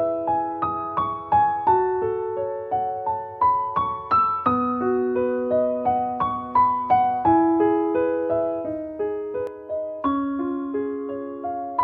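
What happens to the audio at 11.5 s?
At 11.5 s the sound is affected by channel delay (comb filtering), running from 9.47 s to the end of the clip. One channel lags by about 3 ms, and summing to mono cancels evenly spaced frequencies from around 150 Hz upward. The result sounds hollow and phasey.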